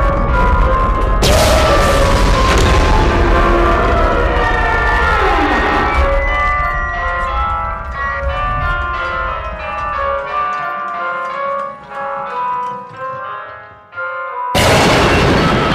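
From start to finish, a stage in the chain is driven about 12 dB beyond what it can pass, so hard clipping flattens the peaks, with somewhere near 7 percent of samples cut off. Those squared tops add high harmonics, giving loud moments a harsh, crackling fuzz.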